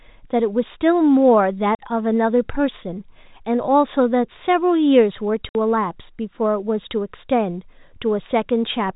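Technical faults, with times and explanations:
1.75 s and 5.49 s: packet loss filled with silence. Dead 40 ms and 60 ms gaps, fitting 10 ms packets, end with hard edges instead of smoothed concealment.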